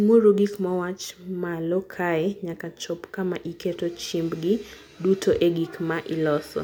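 No technical faults can be heard anywhere in the recording, and the signal holds steady throughout.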